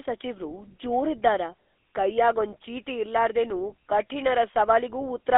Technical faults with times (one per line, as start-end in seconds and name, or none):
0.00-5.38 GSM full-rate codec